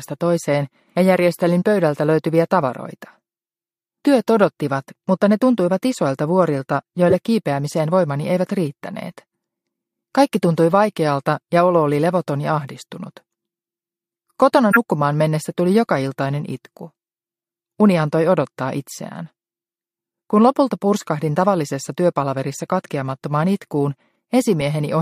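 Four short bursts of corrupt frame decoded turn up, at 4.06 s, 7.09–7.14 s, 14.71–14.77 s and 24.61 s. Each time, a compressed frame had some bits flipped and the decoder played it anyway, so misread gains and codes dump energy at the wrong frequencies. The first and last are brief, weaker errors peaking around -25 and -15 dBFS, about one frame's worth. The middle two span roughly two frames and have error peaks around -5 and 0 dBFS, so they are much stronger than the first and last.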